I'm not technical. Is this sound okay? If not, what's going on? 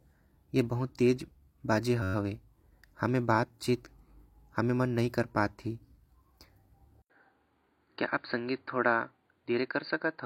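No. There are two problems.

At 2.03 to 2.14 seconds there is a system hang loop. The computer briefly froze, but the sound hardware kept replaying the same tiny slice of audio. That slice is about 11 milliseconds long. It repeats 11 times, roughly 94 times a second, so you hear a short steady buzz instead of speech. The slice length fits a 512-sample buffer.

From 7.02 seconds to the end, the input switched to a poorer device. This was most likely another microphone or a headset's call mode taking over. First there is a gap of about 80 milliseconds of silence. After it, the speech sounds duller, because nothing above 4.7 kHz gets through. The volume stays about the same. The new device also adds its own background noise, though it sits well below the speech.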